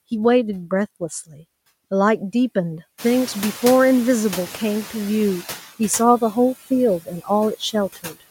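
Throughout, the background sinks between phrases and swells beneath them. These are noise suppressor artifacts: bands judged to be steady noise are pulled down by about 14 dB frame by frame.

From 1.27 to 1.41 s, roughly a tenth of a second of speech turns faint and swallowed, dipping by up to about 13 dB. This is speech cut by the noise suppressor, which mistook quiet speech for background.

Near 3.0 s the room noise jumps by about 19 dB, settling about 16 dB below the speech. From 2.98 to 5.07 s it comes through with less reduction at first, then gradually fades. This is the noise suppressor catching up: its noise estimate needs about 2.1 s to adapt and reaches only about 6 dB of reduction.

From 7.95 to 8.22 s, around 150 ms of speech again sounds swallowed, dropping by up to about 17 dB, as the suppressor cuts speech along with the noise.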